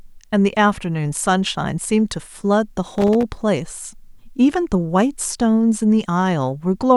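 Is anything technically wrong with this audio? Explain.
Yes. From 2.87 to 3.23 s the speech is broken by loose connector crackle: a worn or dirty contact keeps making and losing contact, chopping the signal and popping on any DC present. Its irregular, scratchy burst sets it apart from evenly spaced digital clicks.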